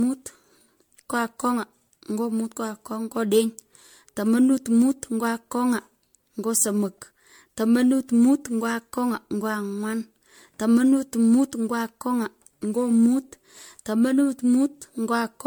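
Generation loss throughout, likely from about seven MP3 passes at around 96 kbit/s, each re-quantising, makes the speech swirly, hollow and smeared, with blurred attacks.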